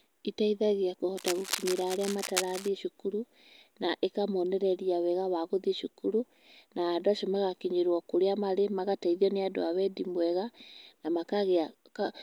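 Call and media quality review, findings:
Cable scratch noise, 1.17–2.68 s, ending just before "cukuru na ĩkamonereria wega". Dense, uneven crackle over speech, roughly 10 dB below it. Likely worn cable or connector moved, contact resistance fluctuating rapidly and injecting noise bursts.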